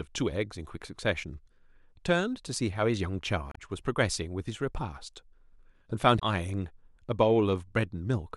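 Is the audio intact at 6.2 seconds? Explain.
No. Damaged data in a compressed stream corrupts the speech from 6.15 to 6.22 s. Bytes in that stretch are wrong, so the decoder misreads the affected frames, loses sync and hunts for the next valid header, leaving a brief garbled glitch.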